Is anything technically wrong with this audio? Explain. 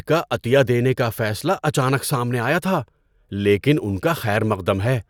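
No, nothing is technically wrong.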